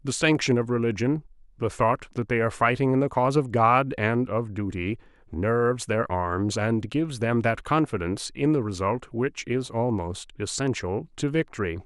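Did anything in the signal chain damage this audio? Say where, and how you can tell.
No, nothing in this speech recording stood out on listening as damage from any stage of the signal chain.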